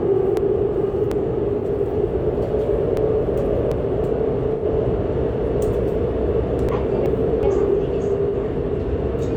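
A recording of everyday sounds, it jumps three times into a jumbled stretch where events seem to happen in the wrong order: 0.37 to 1.12 s, 2.97 to 3.72 s and 6.69 to 7.43 s. These are chunks out of order. Each time a block of about 372 ms arrived one block late and plays after the block that should follow it. Nothing is missing, but the swap leaves three hard joins.

Separately, brief smeared, noisy or phasey patches appear at 1.59 to 1.63 s, 4.53 to 4.64 s and 8.29 to 8.34 s. The middle one, at about 85 ms, is longer. This is AAC frame loss with concealment: the decoder lost data and filled each gap from the last good spectrum. The shorter gaps fit one lost AAC frame and the longer one fits two.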